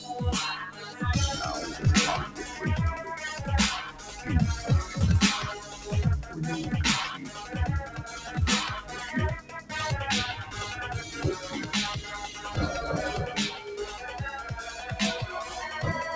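From start to end, a noise suppressor built for speech works on this sound. It treats steady tones, ambience and decays as noise, so level swings by roughly 10 dB. The waveform envelope pumps, and spectrogram energy after each onset thins while attacks stay bright.

At 0.71–1.01 s, 3.87–4.10 s, 5.63–5.87 s, 7.19–7.54 s, 7.86–8.03 s and 9.40–9.72 s, the noise suppressor cuts the sound, dropping it by up to about 8, 9, 5, 7, 7 and 11 dB. The waveform shows dips of a fraction of a second each, and sustained spectrogram bands fade abruptly. Throughout, the spectrogram stops sharply at 8 kHz, which fits a G.722 call path at 64 kbps.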